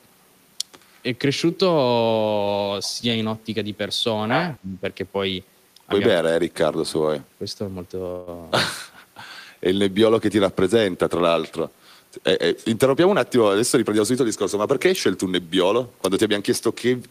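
At 4.29 to 4.57 s, an echo canceller likely failed to cancel loudspeaker pickup, so other side's voice leaking through sits only about 5 dB under the talker. From 4.6 to 4.83 s, during double talk the echo canceller likely clamped down on both voices, suppressing the speech with dips of around 15 dB over roughly 150 ms. At 8.11 to 8.43 s, delayed packets likely emptied the jitter buffer, a call audio freeze where about 156 ms of fading continuation is inserted before the audio resumes intact. From 12.10 to 14.20 s, an overfull jitter buffer trimmed pitch periods repeatedly, a jitter buffer speed-up running about 108% speed at unchanged pitch, sounding hurried.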